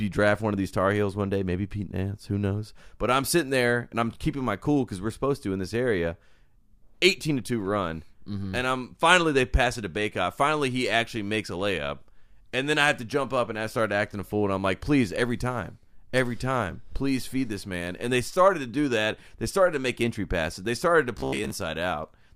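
From 21.18 to 21.50 s, near the end of the clip, the speech turns into robotic sound from repeated short buffers: a rigid, metallic buzz pitched at 66.8 Hz that still loosely tracks the speech. The likely cause is audio arriving too slowly, so the playback path loops a fragment of about 15 ms, and roughly half of the passage is this repetition rather than new audio. A spectrogram shows evenly spaced horizontal harmonics at multiples of 66.8 Hz. The waveform shows the same short shape repeating every 15 ms.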